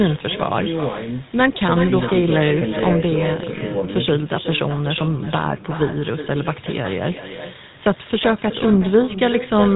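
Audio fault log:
throughout, echo with no canceller: The far end plays the call on a loudspeaker and its microphone feeds that sound back down the line with nothing removing it. Every phrase returns around 400 ms later as a thinner copy, about 11 dB quieter than the speech.
throughout, GSM full-rate codec: The speech passes through a vocal-tract model driven by a sparse, regularly spaced pulse excitation, which fits GSM full rate at 13 kbps. The voice comes out plainly buzzy and gravelly, and nothing is heard above 3.8 kHz, leaving it dull and band-limited.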